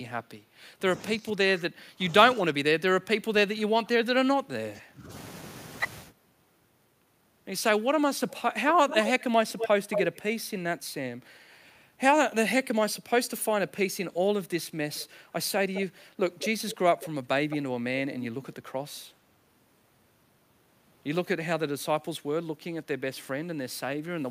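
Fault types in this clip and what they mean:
Speech suppressed in double talk: From 0.88 to 5.1 s the speech sinks in level, dropping by as much as about 20 dB, and is held down for around four seconds in total. The likely cause is both ends talking at once. The echo canceller could not tell this talker apart from the returning loudspeaker sound, so it attenuated everything it picked up during the overlap.
Echo leak: A delayed copy of the speech comes back at 8.29, 8.88 to 10.2, 14.94, 15.74, 16.39 to 17.07, 17.5 and 18.22 s. It trails the original by about 213 to 228 ms and sits about 25 to 5 dB below it, loudest around 9 s. It likely comes from a loudspeaker end whose echo canceller let part of the microphone pickup through and sent it back.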